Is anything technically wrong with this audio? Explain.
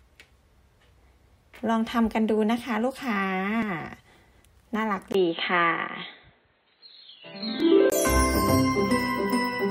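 Yes, there are two kinds of fault.

Audio missing between chunks: at 3.62 s and again at 7.60 s, about 4 s apart, the audio skips by a few hundredths of a second, with both sides butted together. This is likely a chunked recorder losing samples at each chunk boundary.

Input switched to a poorer device: from 5.12 s to 7.92 s the sound turns dull and boxy, with nothing above 4.2 kHz, a level shift of a few decibels and a faint new noise floor. A 20 ms silence marks the change. The likely cause is the input moving to a narrower-band microphone or headset profile and then back.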